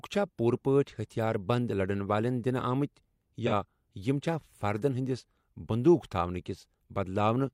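At 3.46 to 3.52 s, just before "یِم چھا فردن", the speech has a brief AAC frame loss with concealment. The gap, about 43 ms, fits a single lost frame. The decoder rebuilt it from the previous good spectrum, so the speech turns smeared and noisy and phasey for an instant. On a spectrogram the harmonics blur into a diffuse, held patch. The waveform shows a short stretch of noise-like fill.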